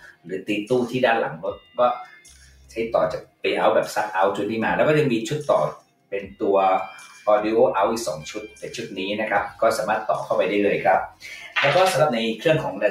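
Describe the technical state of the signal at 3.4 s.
At 3.4 s the signal sits inside a sound cut by the noise suppressor, running from 3.22 to 3.44 s. The suppressor judged this passage to be noise and pulled it down harder than its surroundings. The deepest drop is about 18 dB. Held or decaying parts of the sound sink and their tails are cut short, so the passage audibly dips and thins for roughly a fifth of a second.

This dip sits on top of a noise suppressor applied to music or sounds, active across the whole clip. A suppressor built for speech treats steady tones, ambience and reverb as noise to be removed. Its gain reduction swings by around 10 dB as the material changes. Sharp onsets mostly pass while sustained content is pushed down, giving a pumping, fluttering quality.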